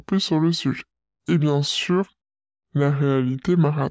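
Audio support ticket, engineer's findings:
Wrong sample rate, entire clip. Playback clock runs slower than the capture clock, with no resampling. The ratio fits material recorded near 22 kHz played at 16 kHz. Speech runs at 0.73x speed, pitch down about 5.5 semitones: low, slow, dragged throughout.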